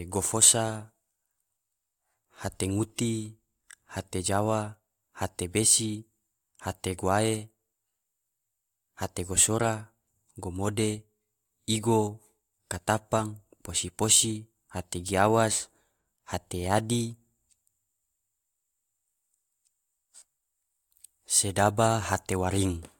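Nothing goes wrong anywhere in this stretch of speech; there's simply no technical fault to point to at any moment.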